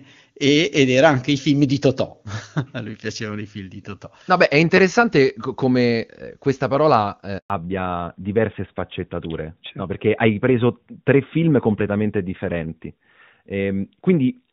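At 7.38 s, right after "come eh questa parola", a 120 ms handover gap leaves the waveform flat while the call switches networks, so the speech briefly drops out.

From 7.50 s to the end, a fallback to narrowband removes everything above 4 kHz. On a spectrogram the band is sharply cut, and the voice sounds duller and rougher than the clear HD Voice before it.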